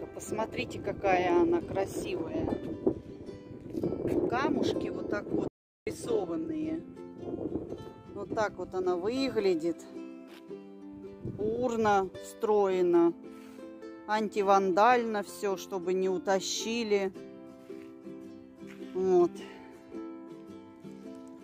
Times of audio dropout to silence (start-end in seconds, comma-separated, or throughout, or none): 5.48-5.87